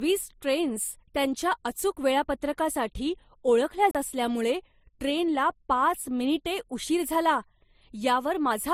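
Right from the start and all the way through, the speech has a layered quality, with two different flavours of compression artefact sitting on top of each other. That points to transcoding between lossy codecs, likely an MP3 around 47 kbit/s re-encoded to Opus at a similar rate. The second encoder spends its bits preserving the first one's damage and then adds its own. The top end still reaches 20 kHz.

At 3.91 s there's a CD skip. You get a brief dropout of roughly 40 ms, and then the speech picks up from a different spot on the disc. The laser has jumped to another turn of the spiral, so the player mutes for a moment and carries on from the wrong place. That's why it sounds like an abrupt cut rather than a smooth gap.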